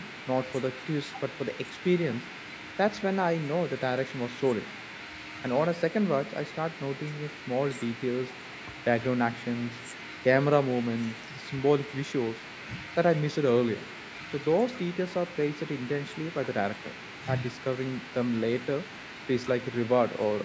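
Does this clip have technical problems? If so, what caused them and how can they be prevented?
No, nothing in this speech recording stood out as a technical problem on listening, and the call microphone processing it passed through, with nothing above 8 kHz and the lowest bass trimmed, is normal behaviour rather than a fault.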